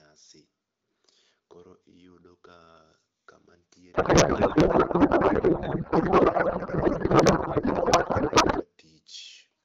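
From 3.93 to 8.65 s, a codec payload misread, which fits octet-aligned AMR frames being read as bandwidth-efficient, replaces the speech with garbled warbling noise that barely tracks it.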